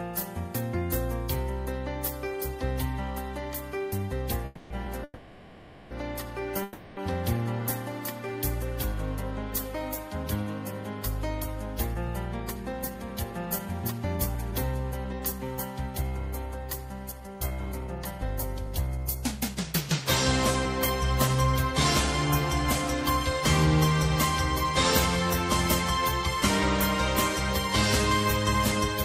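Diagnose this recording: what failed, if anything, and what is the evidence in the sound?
Three stalls where the sound hangs and then picks up where it left off, at 4.45 to 4.86 s, 5.04 to 5.93 s (with a tiny 30 ms silent bit), and 6.63 to 6.99 s. That's a call audio freeze, likely the network holding packets until the jitter buffer ran dry.

Then a jitter buffer speed-up: from 10.24 to 23.02 s the audio runs about 6% fast at unchanged pitch, shedding something like 0.7 s, and again from 26.02 to 29.05 s at about 3%. The receiver's trimming pitch-period slices to drain the backlog.

At 19.88 to 19.91 s there's a short concealed packet loss, a quick smear where roughly 20 ms never arrived. It didn't reach the decoder in time, and the decoder stretched the preceding sound to cover it before blending back in.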